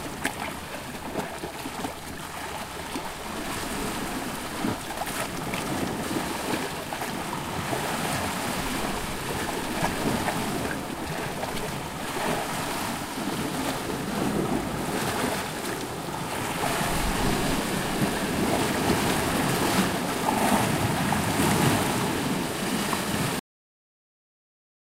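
A cut-off end hits at 23.39 s in this recording of sounds. The audio stops abruptly in the middle of a sound and drops straight to digital silence, with no natural decay or tail, and that silence holds for the remaining 1.45 s. The final buffers of the sound were never written out or played back, so the file simply ends where the data ran out rather than where the sound itself finished.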